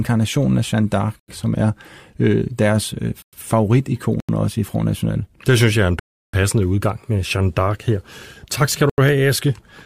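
The playback or processing chain likely failed to fill its output buffer in time, so blocks of digital silence replace the speech in five places: 1.20 to 1.28 s, just before "som er øh deres"; 3.22 to 3.33 s; 4.20 to 4.29 s, before "også i"; 5.99 to 6.34 s, between "synes jeg er en" and "udgang med"; and 8.90 to 8.98 s. Most gaps last about 85 ms, which fits a 4096-sample buffer. The 3.2 s gap runs about 105 ms. The 341 ms hole at 6 s is four times that buffer length. Each gap cuts hard to silence and back with no fade.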